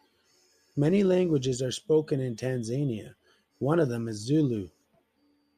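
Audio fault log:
Nothing stood out on listening to the speech here.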